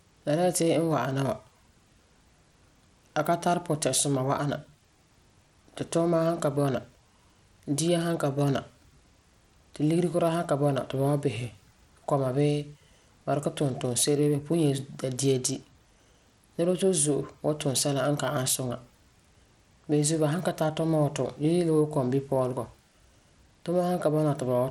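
Throughout the speech the treble sounds thin and flickering, with a gritty, grainy edge and nothing above about 17.1 kHz. This is likely Bluetooth SBC compression at a starved bit pool, fitting roughly 96 kbps, leaving upper sub-bands barely coded.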